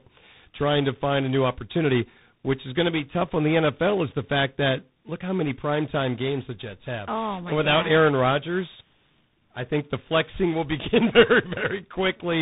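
Tandem speech coding affects the speech from start to finish. The call seems to have crossed about three separate speech coders in a row, each decoding and re-encoding the last one's output. The errors stack up. Nothing is heard above 3.8 kHz, so the speech sounds muffled. The roughness and noise are heavier than any single link would cause. A final slope-tracking stage, which points to CVSD, adds a hiss-like graininess.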